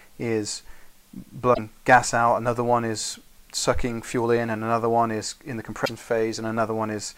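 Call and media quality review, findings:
Damaged data in a compressed stream, twice: short glitches at 1.50–1.59 s and 5.81–5.90 s, each about 80 ms. Probable component: the decoder input, fed corrupted bytes. Mechanism: it can't parse the bad frames, loses sync and hunts for the next valid frame header, so you get that brief glitch before clean audio picks up again. Same length both times, so probably the same kind of hit to the stream.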